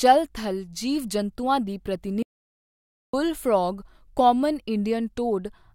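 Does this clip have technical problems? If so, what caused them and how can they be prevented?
Yes, there's an audio dropout to silence from 2.23 to 3.13 s, right after "ਥਲ ਜੀਵ ਜੰਤੂਆਂ ਦੀ" and before "ਫਰੌਗ ਕਾਮਨ". The speech cuts out to silence with no room tone for about 0.91 s, likely a lost input feed while recording continued. Secure cables and wireless links, and check mute controls.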